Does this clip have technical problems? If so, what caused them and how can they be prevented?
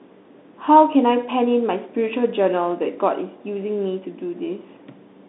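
Yes. The audio went through a Bluetooth CVSD headset codec for the whole clip, which fits a 64 kbps one-bit delta link. The band runs about 200 Hz to 3.7 kHz with nothing above 3.9 kHz, and the step size can't track sharp high sounds, so s sounds come out scratchy over a granular hiss. Using a wideband Bluetooth mode or a wired microphone prevents it.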